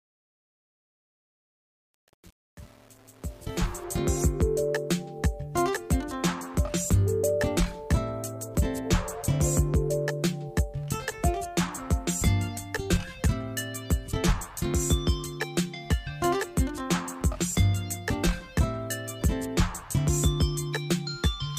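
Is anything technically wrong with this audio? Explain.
Yes. From 0.0 to 3.84 s, truncation distortion on a fade affects the fade-in: the gain stage keeps only about 7 bits with no dither, so the low-level waveform collapses into coarse steps. The quiet opening sounds gritty.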